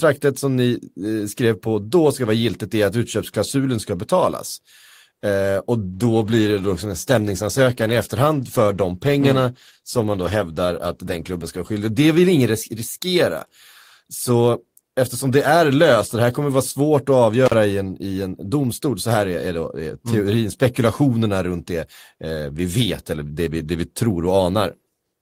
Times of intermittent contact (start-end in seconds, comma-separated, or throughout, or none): 17.46-17.54